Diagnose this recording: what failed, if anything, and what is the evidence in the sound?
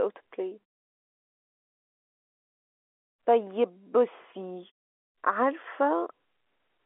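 Nothing stood out on listening; the telephone-band speech and its quiet pauses sound as a normal phone line would deliver them.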